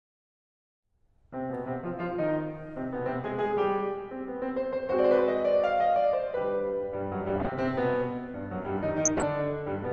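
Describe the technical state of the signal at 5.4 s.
At 5.4 s the music sounds dull and gurgling, with a granular grit on what remains and the top end flickering in and out. This runs through the whole clip and is likely MP2 compression at a low rate, roughly 80 kbps, where too few bits force the encoder to switch off upper sub-bands and coarsely quantise the rest.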